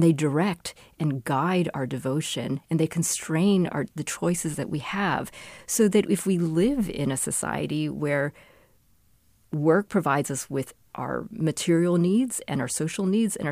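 Nothing technical goes wrong anywhere in this speech recording, so there's no fault to point to.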